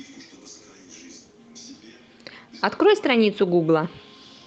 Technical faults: none

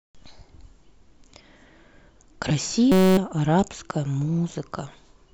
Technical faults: system hang loop

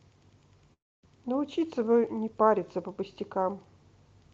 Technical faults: long network dropout

